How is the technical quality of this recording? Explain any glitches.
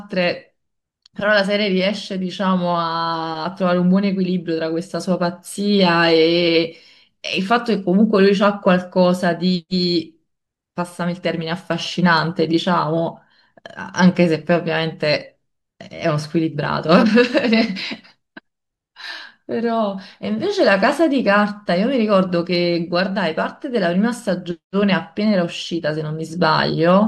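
The recording has one technical problem, running through almost the whole clip.

Clock slip clicks, from 0.13 s to 27.02 s: a faint, regular ticking repeats about every tenth of a second, some 200 ticks in all. The likely cause is two devices on unsynchronised clocks, drifting apart by roughly 200 ppm, so a single sample is dropped or repeated each time the gap adds up to one sample. The ticks stand out most on loud, sustained speech and disappear in pauses.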